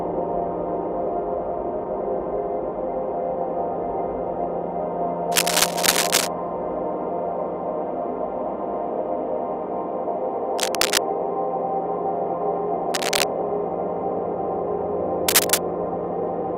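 Cable scratch noise occurs at 5.32–6.28 s, 10.58–11.01 s, 12.91–13.23 s and 15.28–15.61 s. Each is a burst of dense, uneven rustling over the sound, likely from a worn contact shifting. The first and last bursts sit about 5 dB above the signal, and the middle two are roughly level with it.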